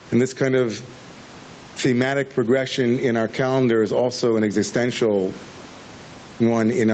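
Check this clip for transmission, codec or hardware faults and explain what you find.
One fault runs through the whole speech clip, heard over a call path whose band stops at 8 kHz, consistent with Opus at around 24 kbps.

Gain pumping, throughout: the level swings by something like 15 dB, leaving the speech squashed and flat in dynamics. The likely cause is input gain set far too high, with a fast limiter clamping down on peaks.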